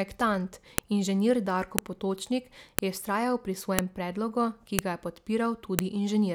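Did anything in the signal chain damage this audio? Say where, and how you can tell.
Yes. The damage happened at the storage or streaming stage, where one-second WAV pieces were joined without stripping their headers, so a file header is played as audio at each join. Those header bytes are decoded as samples, which produces a sharp, loud click at 0.78, 1.79, 2.79 (just before "je vztrajal"), 3.79, 4.79 (just before "ga je") and 5.79 s. The clicks come at a strict one-second spacing regardless of the speech.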